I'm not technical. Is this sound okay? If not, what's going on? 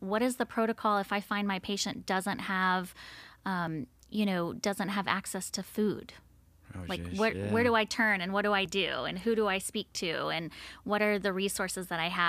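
No. Audio missing between chunks at 3.67 and 8.65 seconds: the sound briefly skips forward, losing about a fiftieth of a second each time. This is likely because the audio is handled in 5-second pieces, and a sliver drops out at each handover.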